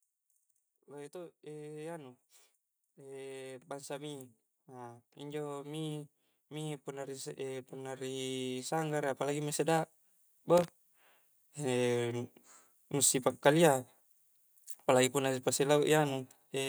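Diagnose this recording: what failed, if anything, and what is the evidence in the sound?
Automatic gain rising, in the call processing stage. From 2.96 s to 9.89 s the speech and the background noise floor climb together, ending about 16 dB louder than where they began. Because both rise in step over nearly seven seconds, this is a level controller adding gain, not the talker speaking up. The AGC judged the input too quiet and kept raising its gain gradually toward its target level.

Loose connector crackle, in the analogue wiring. Between 10.57 s and 10.68 s a short, irregular burst of scratchy crackle is heard. The roughness and broken texture point to an intermittent contact: a worn or dirty connector making and breaking as it moved, chopping the signal on and off. Any DC present on the line would turn each of those breaks into a small pop.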